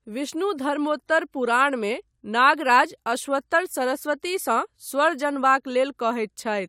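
Nothing stood out on listening to this speech clip.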